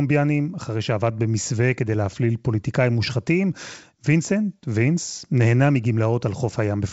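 No technical faults can be heard in this speech.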